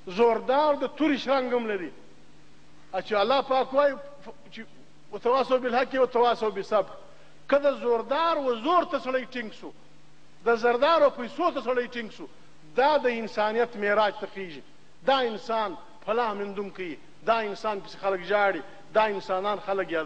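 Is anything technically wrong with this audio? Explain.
No, nothing technically wrong can be heard in this audio; the signal holds steady throughout with no audible disturbance.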